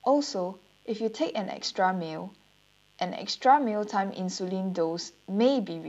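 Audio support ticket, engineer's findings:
Mains buzz, present throughout the speech. Steady, raspy, sitting well under the voice, roughly 35 dB down. 50 Hz mains. Probable source: dimmer, rectifier or unshielded cable. Switching spikes enter twice per mains cycle. Harmonics of 50 Hz stack up into the kilohertz range. Hence the rasp rather than a clean hum. Check grounding and shielding.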